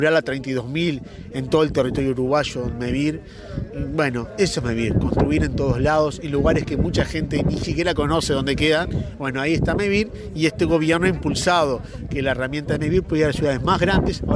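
There are no technical faults to describe at any point in the clip.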